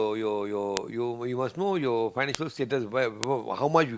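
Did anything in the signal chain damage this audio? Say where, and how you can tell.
Yes. Three bit error spikes sit in this speech clip, at 0.77, 2.35 and 3.24 s. Each is a single sharp tick, one sample wide, peaking near about -2 dBFS. The sound is broadband and has no relation to the speech around it. That points to the digital path, either storage or a digital link. One bit in a sample word flipped. The value leapt by a power of two and snapped straight back on the next sample.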